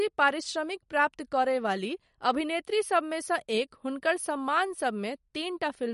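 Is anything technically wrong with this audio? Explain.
Yes, there's clear codec damage across the whole speech clip, likely from MP3 compression. Nothing comes through above 11.2 kHz, where the encoder lopped off the treble to save bits, and weak frequency lines flicker in and out between frames, giving a watery, swirly texture that fits a low bitrate around 48 kbps.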